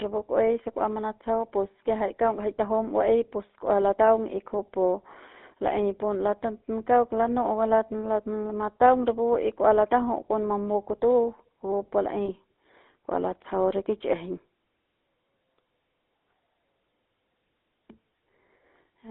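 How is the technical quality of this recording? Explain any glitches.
The technical quality is poor: the whole recording has passed through a low-rate mobile speech codec, and two brief dropouts break the sound.

The GSM full-rate codec runs throughout. The speech was encoded by modelling the vocal tract and exciting it with regularly spaced pulses, keeping only a thinned-out excitation signal, which fits the 13 kbps full-rate scheme. The line band runs only from about 250 Hz to 3.7 kHz, so the audio sounds narrow and thin. The codec damage is plainly audible as a buzzy, gravelly roughness on the speech.

Lost GSM frames occur twice, from 2.08 to 2.11 s just before "kaung jai tajum", and from 12.26 to 12.31 s right after "kupu pu". Each gap fits a single missing 20 ms frame. The decoder filled it by reusing the parameters of the last good frame, so the sound briefly freezes into a short, rough, metallic ring before normal decoding resumes.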